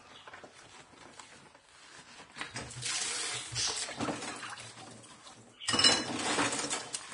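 A recording of everyday sounds carrying heavy Vorbis compression damage from start to finish: nothing above about 10.6 kHz, and the treble turns hissy and grainy, with roughened tones and smeared attacks. That's likely a low-quality Vorbis encode, fitting a bitrate around 33 kbps.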